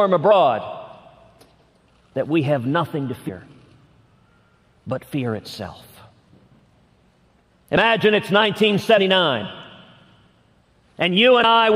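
At 0.30, 3.28, 5.11, 7.76, 8.97 and 11.43 s the sound jumps forward, the mark of compressed frames skipped. Whole blocks were never decoded, so a short stretch of audio disappears: roughly 50 ms at most points, about 100 ms at 8.97 s and about 150 ms at 3.28 s, which fits a frame length near 23 ms. On a waveform the envelope shows a step, and a spectrogram shows a narrow vertical seam where the sound breaks and restarts.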